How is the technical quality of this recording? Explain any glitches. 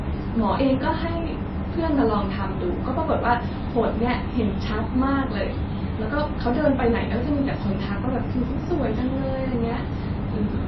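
The quality is poor throughout. The speech sounds watery and swirly, with nothing above 5.8 kHz, pointing to likely MP3 compression at a low bitrate near 24 kbps that cuts treble and drops weak detail.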